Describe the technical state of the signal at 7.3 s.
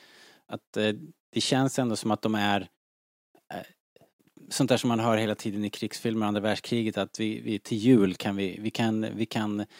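At 7.3 s the speech signal is intact, with no audible fault at that moment.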